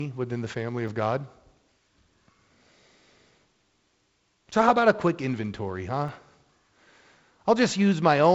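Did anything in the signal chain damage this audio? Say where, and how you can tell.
Yes. Three sharp, isolated clicks land at 0.88 s, 4.53 s and 6.09 s. Each is a single thin vertical line with no gap in the speech, which points to dropped samples. Under a millisecond is lost each time, likely a driver or buffer stage skipping a few samples and leaving a step in the waveform.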